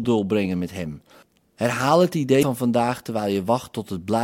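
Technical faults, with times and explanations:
2.39–2.43 s, damaged data in a compressed stream: a brief glitch cuts across the speech for about 40 ms. Corrupted bytes at this point leave the decoder unable to read those frames, so it loses sync and searches until it finds the next valid frame header.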